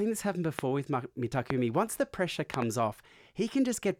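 A loud pop lands at 0.59 to 0.61 s, just after "this happen", another at 1.50 to 1.52 s, and a double pop at 2.54 to 2.64 s after "the pressure", each spiking roughly 20 dB above the speech. The speech continues beneath them. A sudden voltage step was likely added to the signal, from a plug, switch, static discharge or driver glitch, and the following circuitry shapes it into a sharp thump.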